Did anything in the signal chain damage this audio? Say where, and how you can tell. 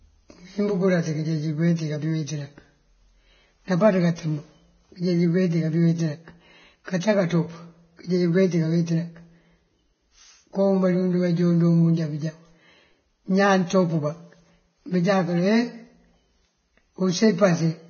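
Yes: Vorbis compression, throughout the speech, at the codec stage. Nothing survives above 6.6 kHz and the treble is hissy and grainy, which points to roughly 17 kbps. The likely cause is residue quantised so coarsely that fine detail became noise.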